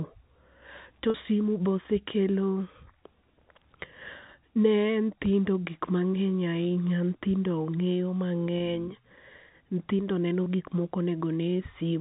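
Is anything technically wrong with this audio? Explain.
Yes. Packet loss with pitch repetition occurs at 1.10–1.14 s (40 ms, which fits two lost packets), 8.58–8.60 s and 10.44–10.46 s, just before "gik ma". The receiver loops the last pitch period, giving a brief buzzy hold. The waveform shows identical repeating cycles, and the spectrogram shows frozen harmonics. The telephone-band G.711 coding passes through as expected.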